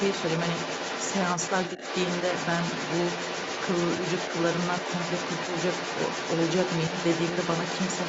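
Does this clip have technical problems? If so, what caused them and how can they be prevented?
Yes: the other side's voice leaks through from 0 to 8.08 s, only a little quieter than the talker. It is a second voice rather than a delayed copy, likely residual echo the echo canceller missed. Using a headset, or a better-tuned echo canceller, would prevent it.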